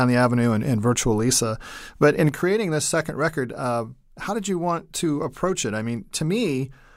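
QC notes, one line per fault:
2.29 s to end, one channel drops out: at 2.29 s the speech level falls abruptly by about 6 dB and stays down to the end of the clip, with no fade or recovery. This is most likely one stereo channel going silent, so the mono sum keeps only half of the shared signal and loses anything unique to that channel. On the waveform the envelope steps down sharply at 2.29 s; the spectrogram shows a uniform darkening across all frequencies from that point.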